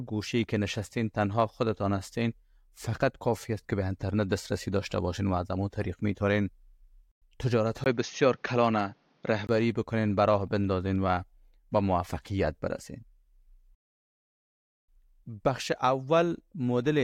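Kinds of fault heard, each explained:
Input switched to a poorer device: at 7.84 s the speech briefly goes dull and boxy with a 20 ms gap, nothing above 6.6 kHz, quiet added background noise, likely a lesser mic taking over.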